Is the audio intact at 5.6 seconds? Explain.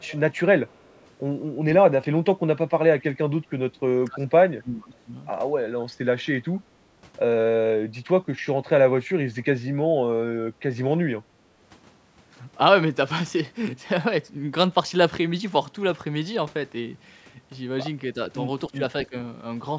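Yes, the speech at 5.6 s is intact, with no fault at that moment; the call microphone processing it passes through keeps everything below 8 kHz and trims only the lowest bass, as such processing normally does.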